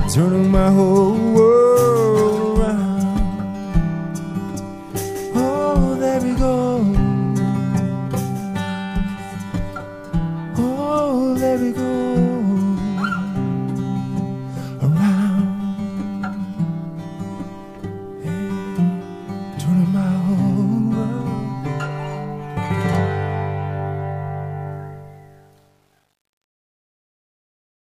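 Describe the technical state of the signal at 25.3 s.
At 25.3 s, truncation distortion on the fade-out (24.72–27.92 s) is under way: undithered samples, consistent with 10-bit steps, turn gritty. The waveform shows stair-stepping and the spectrogram a broadband haze, worsening after 25.49 s.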